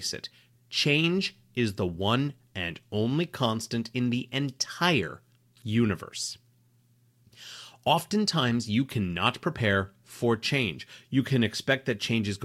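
Nothing here trips up the ear; the speech just runs along with no audible glitches, dropouts or distortion at any point.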